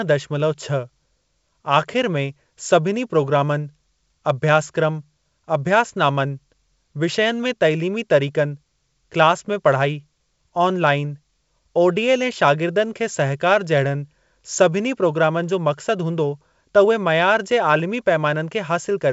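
No faults are audible in the speech, which carries the wideband telephone bandwidth expected of G.722 coding at 64 kbit/s.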